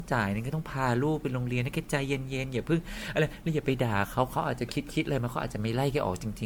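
Throughout, the speech was likely decoded and re-encoded by a lossy codec about seven times, in a way that fits MP3 at around 96 kbit/s. This generation loss piles up quantisation noise and spectral holes, leaving a swirly, hollow, smeared sound with blurred attacks.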